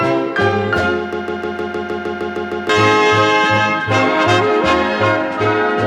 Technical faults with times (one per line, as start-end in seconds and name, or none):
1.13-2.69 broken-record loop